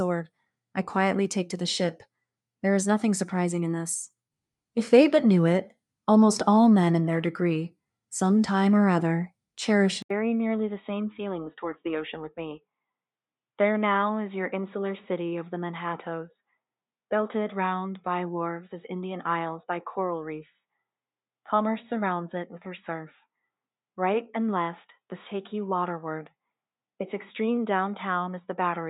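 The recording input was likely switched to a poorer device at 10.02 s. After an 80 ms silence, the sound turns dull and boxy with a narrower band, drops a few decibels in level, and carries a faint new noise floor through to the end.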